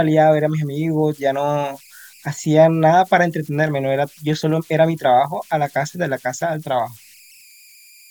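A whistle sits near 2 kHz across the whole recording, most noticeable in the pauses between phrases, with a grainy, gritty texture running under the quieter stretches of speech, at about 31 dB below the signal. These are converter idle tones: a delta-sigma converter working without dither settled into repeating bit patterns whenever its input was small, and those cycles turned into an audible tone whose pitch was set by the input's offset.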